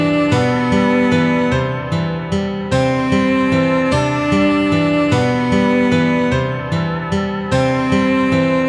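No dropouts, glitches, distortion or timing errors turn up anywhere in the audio.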